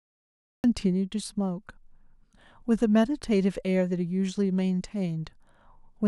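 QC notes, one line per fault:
0.00–0.64 s, cut-off start: the file holds digital silence until 0.64 s, then speech appears abruptly partway through a sound, with no natural onset or rise, because capture began after the talker had already started. On the waveform this is a flat near-silent line that jumps straight to the speech signal at 0.64 s. On a spectrogram it is an empty region ending in a hard vertical edge, where energy appears across the band at once.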